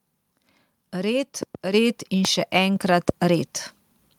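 A voltage pulse, likely from a plug, switch, static or driver glitch, entered the signal twice: a loud pop between 1.43 and 1.57 s arrives as two sharp cracks in quick succession, and a single loud pop follows at 2.25 to 2.27 s, each roughly 15 dB above the speech, which continues underneath. Between them, at 1.74 s, the microphone volume stepped up when the call software raised the input level in one jump, so speech and background both become abruptly about 6 dB louder.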